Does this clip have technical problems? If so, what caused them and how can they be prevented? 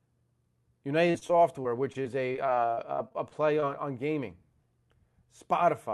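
Yes. From 1.07 to 3.64 s, just before "on gaming", the speech turns choppy and robotic. This is repeated packet loss: short holes, the longest 50 ms, were each papered over by extending the preceding sound. A steadier network connection or a deeper jitter buffer would prevent it.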